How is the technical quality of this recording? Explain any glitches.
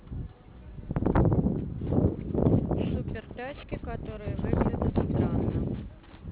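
The recording has one fault, aliasing, which runs through the whole speech clip. The sample rate was lowered without first removing content above the new limit, which points to a drop from 16 kHz to 8 kHz. Energy above 4 kHz folds back below that edge at unrelated frequencies, faintly, roughly 30 dB under the speech. Sibilants come out gritty and metallic rather than simply dulled. A plain low-pass would muffle them cleanly, with no stray tones.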